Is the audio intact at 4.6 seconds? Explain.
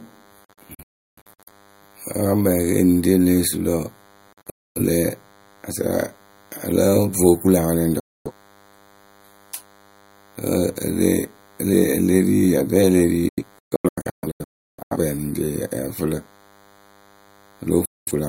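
No. The receiver lost the digital signal from 4.33 to 4.81 s, so this digital broadcast dropout mutes the speech within about 3 ms, leaving short holes that total about 341 ms, the longest about 256 ms. A nearby DECT cordless phone's 100 Hz radio bursts, rectified by the audio circuit, also add a thin, steady buzz well below the speech.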